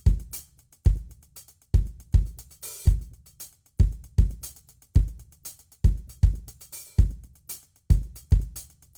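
From start to finish the music carries plainly audible damage, likely from Opus compression in its full-band music (CELT) mode at a low rate, which fits roughly 24 kbps. Starved of bits, the encoder keeps each band's energy but refills the fine detail with folded copies or noise, so tones sound rough, grainy and hissy rather than swirly. A spectrogram shows content reaching about 20.2 kHz with few holes, but harmonics blur into speckled noise bands.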